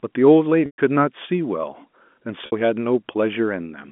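Packet loss with pitch repetition occurs twice in this telephone-band speech, once from 0.66 to 0.78 s (120 ms) and once from 2.46 to 2.52 s (60 ms). The receiver covers each gap by looping the last pitch cycle it received and fading it out, so the sound briefly turns buzzy and held. The longer gap fades toward silence. On a spectrogram the harmonics go flat and dim. The waveform shows identical repeated cycles shrinking in level.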